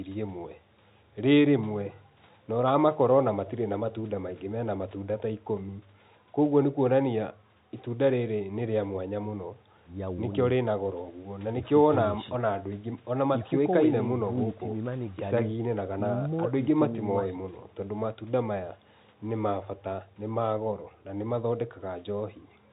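Nothing faulty can be heard anywhere in this speech.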